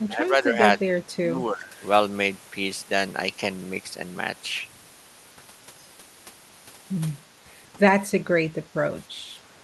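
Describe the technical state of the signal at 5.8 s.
At 5.8 s the speech is intact, with no dropout, glitch or distortion, only the ordinary character of audio carried over a call codec.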